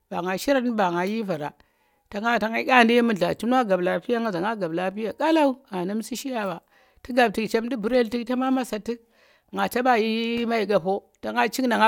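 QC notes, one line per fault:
No faults detected.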